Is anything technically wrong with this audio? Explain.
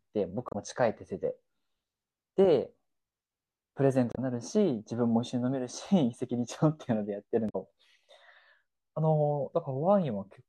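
Yes, there's damaged data in a compressed stream, three short hits at 0.49 to 0.55 s, 4.12 to 4.19 s and 7.46 to 7.56 s. Bad bytes trip up the decoder, which loses frame sync and hunts for the next header, so each spot comes out as a quick chirp, squawk, click or short gap in the speech.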